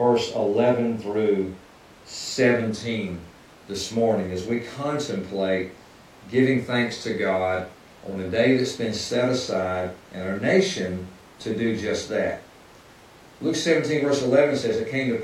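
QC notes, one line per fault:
No faults heard anywhere in the speech.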